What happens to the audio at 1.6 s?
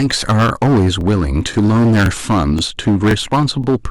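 Just before 1.6 s, from about 1.54 to 1.56 s, there's an overlapping-chunks fault. The audio was processed in half-second blocks, and the next block began before the previous one had finished, so about 25 ms of the speech plays twice at the seam. You hear it as a quick stutter or click, a tiny doubled fragment where the sound should run smoothly.

That moment also carries the hard clipping that runs through the whole clip. The speech is driven about 14 dB past what the signal path can pass, so the peaks get sliced flat, with roughly 15 percent of samples hitting the ceiling. Those squared-off tops add high harmonics, which gives every loud syllable a harsh, gritty fuzz. It sits right on top of the stutter.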